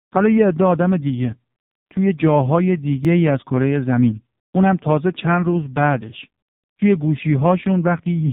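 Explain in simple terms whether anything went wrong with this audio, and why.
Two things went wrong. Throughout the recording, the speech has passed through the AMR narrowband mobile codec, the squeezing system used for old 2G and 3G phone calls. It strips out everything above about 3.8 kHz, so the speech sounds dull and boxed-in. It is squeezed hard enough that the speech turns buzzy and artificial. That buzziness sets it apart from a simple muffling filter, which would dull the sound without making it sound synthetic.

At 3.05 s there is a repeated buffer. The playback device ran short of fresh audio for an instant and played the last tiny slice again, once. The slice lasts only about a millisecond, which fits a very small 64-sample buffer. At that size the repeat is heard as a click or brief buzz, not a stutter. Unlike a dropout, no sound goes missing, because the same bit simply plays twice with a hard join.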